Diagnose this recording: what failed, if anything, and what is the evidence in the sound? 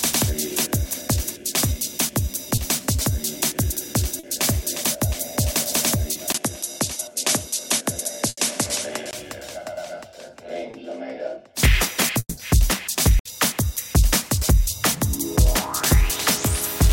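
Network stage, short concealed packet loss. Packets failed to reach the decoder in time at 2.55–2.59 s, 4.19–4.25 s, 6.13–6.17 s and 10.71–10.75 s. The gaps last about 20 ms each, except the 40 ms gap at 4.19 s. Each time the receiver extended the preceding sound, from its pitch where it was periodic and as shaped noise where it was not, and then crossfaded back into real audio. The result is a brief smear or wobble, and any very short sound falling inside the gap is lost.

Capture stage, input switched to a poorer device. At 6.32 s the input changes character after a 20 ms silence. From there to 9.13 s nothing is present above 11.8 kHz, the level sits a few decibels lower, and a new noise floor appears roughly 50 dB under the signal. The narrowed band and duller, boxy tone most likely come from the system moving to a different microphone or a headset's call profile, with the fuller sound returning at 9.13 s.

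Network stage, burst of packet loss. Consecutive packets went missing at 8.29–8.39 s (80 ms, inside the switched-input stretch) and again at 13.19–13.27 s (60 ms). The concealment continued the last sound while attenuating it. Depending on what preceded each gap, it is heard as a held buzz or a fading hiss. The audio then resumes further along, and the material that fell in those gaps is simply absent.

Network stage, long network dropout. From 12.19 to 12.39 s no audio arrived, most likely an interruption in the network path rather than isolated packet loss. For about 180 ms the receiver stretched the last sound into a decaying buzz or hiss. That ran out into roughly 40 ms of silence before real audio came back, and the stretch in between was never played.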